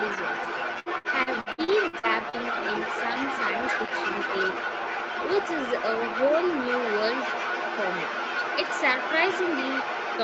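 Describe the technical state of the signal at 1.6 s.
Repeated packet loss (robotic sound), 0.79 to 2.35 s: lost packets are patched by stretching the preceding sound, leaving choppy, robotic speech with gaps up to 68 ms, roughly 29% concealed.

Other side's voice leaking through, whole clip: a second voice sits only about 5 dB under the speech, likely far-end audio the echo canceller failed to remove.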